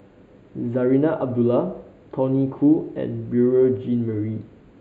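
Channel delay (comb filtering) runs through the whole of this speech clip: one channel trails the other by roughly a tenth of a millisecond, which fits a lag of about four samples, and the mono sum cancels near 5 kHz, dulling and hollowing the upper range.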